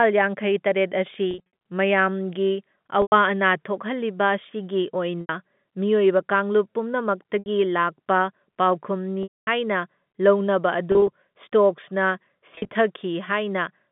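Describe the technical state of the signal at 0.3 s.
At 0.3 s the signal is intact, with no fault present, only the narrow band of ordinary G.711 telephone coding.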